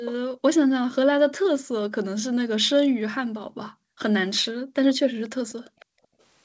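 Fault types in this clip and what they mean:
Echo leak: a delayed copy of the speech returns about half a second after the original. It is heard briefly near 0.05 s at around 15 dB below the speech, and far more faintly from 5.5 to 5.85 s, likely because the echo canceller let loudspeaker pickup through.
Background gated by the echo canceller: the room sound is pulled down hard, by up to about 40 dB, for spells of roughly 0.1 to 0.5 s starting at 0.23, 0.63, 1.05, 3.48, 4.52 and 5.65 s, returning when the canceller releases.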